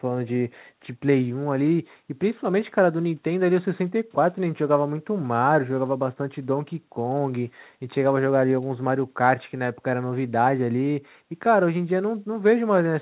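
Speech carried over a call link, with nothing technically wrong, and the lack of anything above 4 kHz fits a G.711 mu-law path at 64 kbps.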